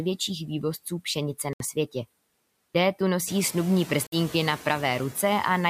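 Noise suppressor artifacts run through the whole speech clip: the suppressor cuts bands it judges to be steady noise by about 20 dB, frame by frame, so the background sinks between phrases and swells back under them, and the room noise rises about 10 dB near 3.5 s.

A Bluetooth dropout is the likely cause of two 90 ms holes, at 1.53 to 1.62 s and 4.07 to 4.16 s. Packets arrived too late to play, so the output went silent and then resumed further on, as if the sound had carried on underneath.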